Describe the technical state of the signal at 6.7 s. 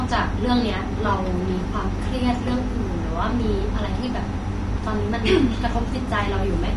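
At 6.7 s the speech carries plainly audible low-delay AAC compression, present throughout: rough, grainy harmonics with noise between them, likely from short-frame AAC-ELD near 32 kbps, not longer-frame swirling artefacts.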